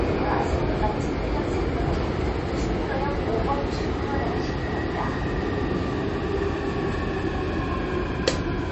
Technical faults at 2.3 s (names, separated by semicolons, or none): MP3 compression